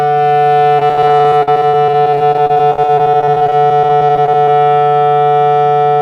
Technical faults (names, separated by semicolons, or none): repeated packet loss (robotic sound)